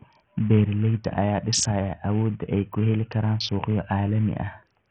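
From start to finish the speech carries heavy damage of the kind Bluetooth SBC compression leaves, likely from a low bit pool near 48 kbps. Top sub-bands starve, so treble flickers and drops, coarse quantisation adds gritty noise and aliasing, and nothing remains above about 16.9 kHz.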